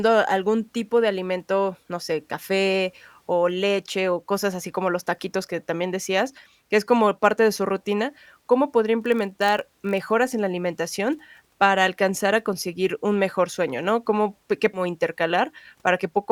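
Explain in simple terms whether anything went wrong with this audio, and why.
Two things go wrong in this speech recording. From 8.99 to 10.11 s, just before "en la alimentación para", a steady buzz of about 47 Hz sits under the voice. This is a block size mismatch (padded): one stage hands over chunks shorter than the next stage reads, which fits a 1024-sample read, and the gaps are filled with silence. Unlike a dropout, the gaps repeat so evenly that they fuse into a hum, and the pace stays almost normal.

At about 14.74 to 14.80 s the sound jumps forward abruptly with a small blip, as if a piece of the recording were missing. The likely cause is a stream segment skipped: one chunk of the streamed audio failed to arrive and playback carried on from the next. This is a single jump, not a repeating buzz.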